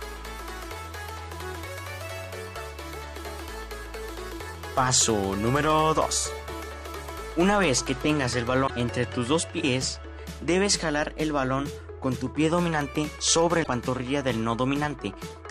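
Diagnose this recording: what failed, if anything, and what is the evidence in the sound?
Codec-level failure: damaged data in the compressed stream gives short 70 ms glitches at 8.64 s and 13.60 s, where the decoder loses frame sync and resyncs.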